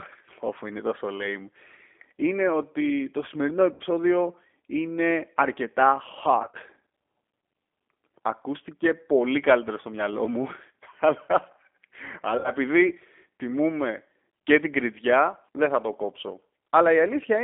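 Throughout, the speech carries G.729 codec damage: the 8 kbit/s encoder rebuilds each frame from a vocal tract filter and a few pulses, so the voice sounds rough and slightly synthetic. A spectrogram shows energy confined to about 250 Hz to 3.5 kHz, with smeared harmonics.

VoIP packet loss concealed by the speech codec follows at 3.74 to 3.84 s, 6.42 to 6.57 s and 12.38 to 12.50 s. The decoder extrapolates the last pitch and filter to cover missing audio: 60 ms in the first and third gaps, and at 6.42 s 90 ms scattered over 120 ms in runs of up to 30 ms. Each gap is stretched into a buzzy tone or coloured noise that fades, and the voice stays weak for a moment after audio resumes. The waveform and spectrogram show the stretched, decaying sound filling each gap.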